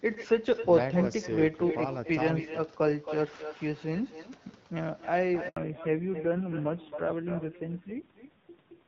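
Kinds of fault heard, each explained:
Echo with no canceller: The far end plays this speech on a loudspeaker, and its microphone sends it straight back. Nothing removes it. So every phrase is trailed by a second copy, around 300 ms later. That copy sits about 11 dB below the direct speech. It sounds thinner than the original. The shadow runs through the whole clip.
Handover gap: At 5.48 s the call switches from one network to another. No speech frames arrive during the switch. The sound dies away and leaves a silence of 80 ms, ending at 5.56 s. Whatever was said in that moment is simply lost. The speech then resumes on the new link.
Fallback to narrowband: Right after the gap, from 5.56 s to the end, the call drops out of HD Voice. Before that, the wideband codec keeps speech fairly clear, at a quality that fits around 12.65 kbit/s. After the switch nothing above 4 kHz survives. Sibilants and breath lose their edge. 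The speech turns duller and rougher. That roughness suggests a low narrowband rate, near 5.9 kbit/s.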